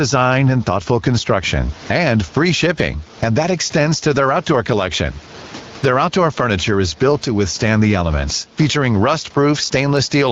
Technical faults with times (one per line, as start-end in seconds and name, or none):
0.00-10.32 gain pumping